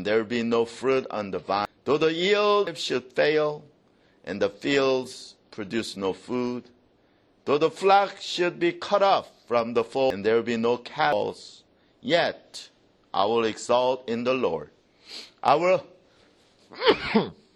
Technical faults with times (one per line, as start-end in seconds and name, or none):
1.65 compressed frames skipped
2.67 compressed frames skipped
10.10 compressed frames skipped
11.12 compressed frames skipped
16.60 compressed frames skipped